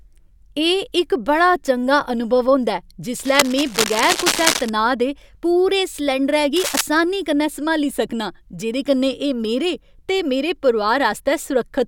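From 3.19 to 4.71 s, and again briefly from 6.56 to 6.81 s, cable scratch noise rasps over the speech at nearly the same loudness. It is likely a worn cable or connector being moved, its contact resistance flickering. Unlike the scattered ticks of crackle or the clean gaps of a dropout, these are dense, uneven bursts of rustling that come and go with the movement.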